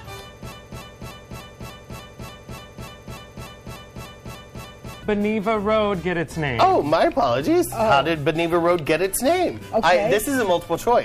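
A broken-record loop runs from 0.52 to 5.03 s: a 294 ms fragment repeats 15 times back to back, likely from a stalled player or stream, losing the underlying audio.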